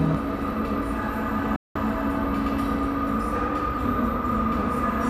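At 1.56 s the receiver stops getting decodable frames, either because the digital signal drops out or because frames fail their checksum, so it mutes its output: a digital broadcast dropout. The sound fades to silence within about 3 ms, which is heard as an abrupt cut, and stays silent until 1.76 s. About 192 ms of the programme is simply missing, which fits a run of eight lost 24 ms frames. Then the sound resumes mid-stream.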